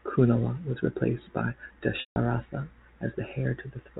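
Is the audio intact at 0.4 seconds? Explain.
Yes, the speech at 0.4 s is intact, with no fault at that moment, just the narrow telephone band of the G.711 coding it passes through.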